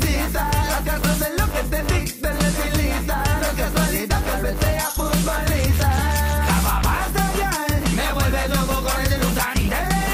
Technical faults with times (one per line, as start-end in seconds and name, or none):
none